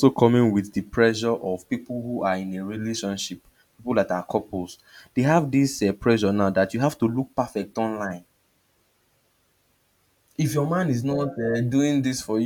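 No audible technical faults turn up anywhere in this speech recording: no dropouts, clicks, distortion or timing glitches.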